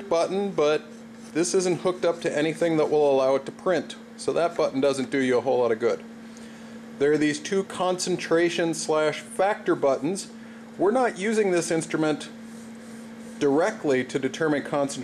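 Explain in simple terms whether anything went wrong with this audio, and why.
Nothing went wrong here: no audible fault anywhere in the recording.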